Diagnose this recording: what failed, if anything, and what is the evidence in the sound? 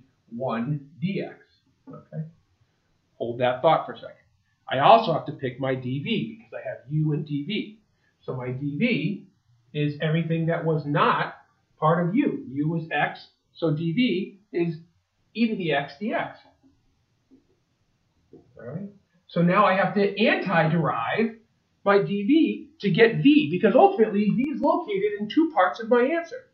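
A momentary drop-out of one channel, likely at a loose connection in the analogue wiring, runs from 24.44 to 24.64 s. With the channel gone, the mono sum falls abruptly by about 6 dB for 0.19 s. The waveform shows a sudden step down and back up, and the spectrogram dims evenly across all frequencies.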